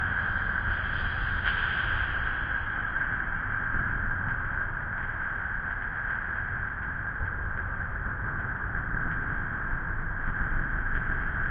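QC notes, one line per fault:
0.0–4.0 s, adaptive stream starting at a low bitrate: the player opened on a low-bitrate rendition of the stream so playback could start quickly, then switched up once it had gauged the connection. Over these four seconds the treble is either missing or synthetic and codec artefacts are stronger, which fits AAC-LC at around 24 kbit/s. At 4.0 s quality improves suddenly with no gap, consistent with a step up to roughly 96 kbit/s.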